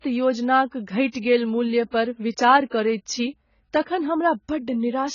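From start to finish the speech is band-limited, with nothing above 7 kHz. Its smeared, warbling sibilants mark heavy AAC compression, likely AAC-LC at a rate that fits about 16 kbps. That texture sets it apart from a plain low-pass filter, which dulls without adding fizz. From 2.70 to 2.72 s, a 22 ms smear of hiss runs just ahead of a sharp attack. This is pre-echo: the codec spread quantisation noise across the whole block, so the noise arrives before the attack. That ordering distinguishes it from a click or dropout.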